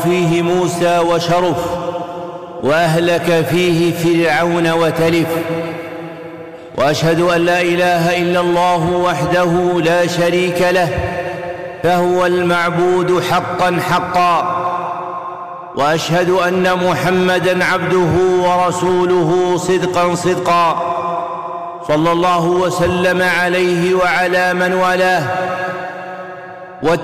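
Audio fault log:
throughout, hard clipping: The signal runs about 12 dB hotter than the stage can pass. Around a tenth of the samples hit the ceiling and are cut flat. Those squared tops add high harmonics, so every loud passage carries a harsh, gritty fuzz.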